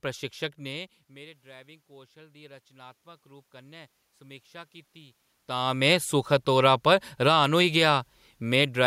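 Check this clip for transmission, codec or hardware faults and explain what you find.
The clip shows two automatic gain control faults, one overlapping the other near the end.

Automatic gain rising runs from 0.59 to 8.02 s. After the input level dropped by about 23 dB, around where the talker moved away from the microphone near 0.5 s, the gain control slowly added about 8 dB. Speech and room noise swell upward together over several seconds.

Automatic gain falling starts at 7.12 s and continues to 8.82 s, overlapping the end of the rise. The gain control judged the input too loud, or its background noise too strong, and pulled its gain down by about 4 dB, so the speech and its background sink together in level.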